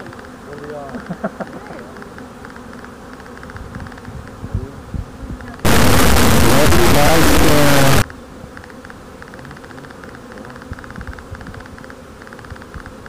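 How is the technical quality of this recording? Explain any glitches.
The recording has one serious glitch. From 5.65 to 8.02 s, integer read as float: the pattern points to 32-bit integer samples decoded as 32-bit float. The sound becomes an extremely loud, buzzing square wave that collapses to silence in quiet moments.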